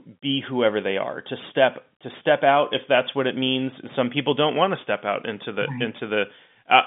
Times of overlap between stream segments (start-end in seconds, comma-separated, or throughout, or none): none